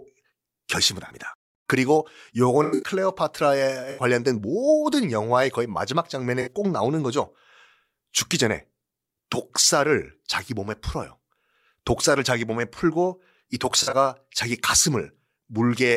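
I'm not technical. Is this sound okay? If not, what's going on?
No. The speech has five short dropouts, each a case of corrupt frame concealed: at 1.07–1.11, 2.63–2.91, 3.91–4.02, 6.40–6.49 and 13.82–13.94 seconds. Small blocks of the compressed audio were damaged, and the player detected this and covered each gap itself, either with silence or with a blurred copy of the sound just before.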